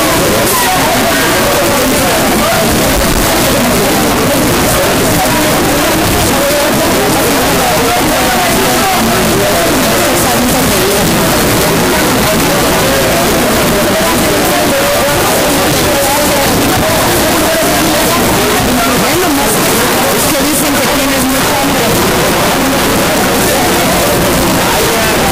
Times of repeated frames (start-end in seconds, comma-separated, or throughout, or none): none